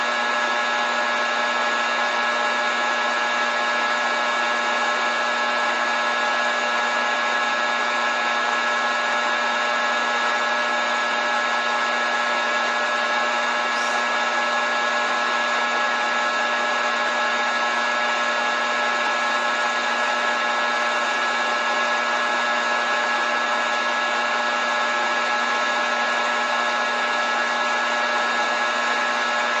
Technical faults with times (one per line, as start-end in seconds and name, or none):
none